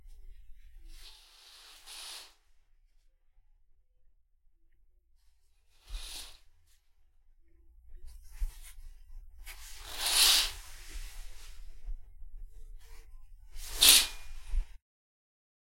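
No technical faults are audible.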